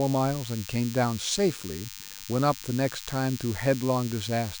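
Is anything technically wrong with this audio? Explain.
Yes. A DECT cordless phone buzz runs under the speech for the whole clip. A nearby DECT handset or base station transmits a brief radio burst every 10 ms. The audio circuitry rectifies those bursts, so they turn into a 100 Hz repetition. Because each burst is sharp-edged, the buzz is thin and rich in harmonics rather than a smooth hum. It sits roughly 15 dB below the speech. It stays steady from start to finish.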